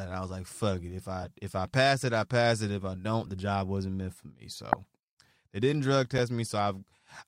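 Speech, marred by four corrupt frame decoded events: 1.21–1.28 s, 3.25–3.28 s before "the job wasn't meant", 4.72–4.76 s after "wasn't meant for me", and 6.18 s after "they didn't drug". Damaged frames were decoded anyway. Misplaced energy makes brief chirps, squeaks, blips or bursts of noise. The 4.72 s burst peaks around -5 dBFS. The 3.25 s one is faint.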